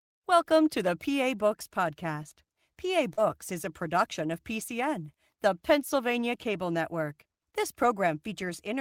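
At 3.13 s, just before "is a production of", the speech suffers a short concealed packet loss lasting until about 3.20 s. Roughly 40 ms of audio failed to arrive in time, and the receiver papered over about 38 ms of it by extending the preceding sound, pitched where it was voiced and as shaped noise where not, before crossfading back. It comes across as a quick smear or wobble rather than silence, and what distinguishes it from a rebuilt packet is that the fill is a guess with no real content behind it.

Inside that stretch, from 3.17 to 3.19 s, a lost packet was rebuilt from error correction: the following packet carried a low-bitrate duplicate of the missing 20 ms, and the decoder played that instead. Because real, if coarse, audio is present, there is no gap and no invented continuation here. The 20 ms sounds grainier and noisier than its surroundings, a roughness in texture rather than the smeared, sustained quality of the concealment around it.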